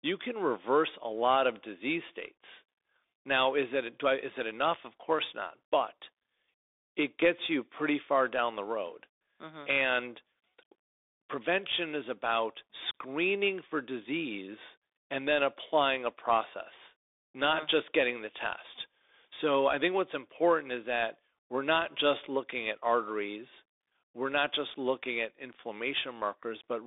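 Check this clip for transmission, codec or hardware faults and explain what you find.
There's one fault, and it runs the whole length of this speech clip: it's been through a Bluetooth CVSD headset codec. CVSD sends a single up-or-down bit per sample and keeps adapting its step size, which fits a 64 kbps link. The band sits at roughly 300 Hz to 3.6 kHz, with nothing above 3.7 kHz, so the voice sounds boxy and phone-like. The codec damage is plainly audible: scratchy s sounds, distortion on loud high parts, and a grainy hiss underneath.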